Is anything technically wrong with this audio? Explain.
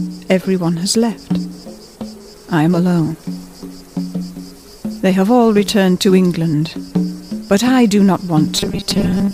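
Yes. From 8.56 s to 9.33 s the sound turns into a rigid, metallic 200 Hz buzz, the robotic sound from repeated short buffers. The likely cause is late-arriving data, with roughly half the audio filled by repeating a 5 ms buffer.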